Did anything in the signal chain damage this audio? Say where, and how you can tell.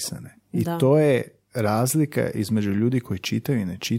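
Yes. At the streaming and playback stage, an overlap between stream segments occurred at 3.23 s, right after "to je razlika između". Two delivered segments carried time stamps that overlapped, so the player trimmed what it took to be duplicated audio. That audio was not actually repeated, so roughly 13 ms of real signal was discarded. The waveform jumps across the missing stretch, which is heard as a tiny skip forward in the speech.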